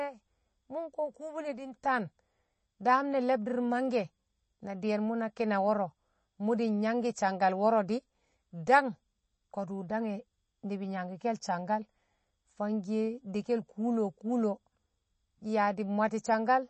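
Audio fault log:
Throughout: MP3 compression. The speech has nothing above about 8.3 kHz, so it sounds dull. The damage is plainly audible. The sound is watery and swirly, and sibilants turn metallic and chirpy. The likely cause is an MP3 encoder starved of bits, which fits a low rate around 32 kbps. It cut all treble above that fixed frequency. It also dropped quiet frequency detail that flickers between frames, causing the swirl.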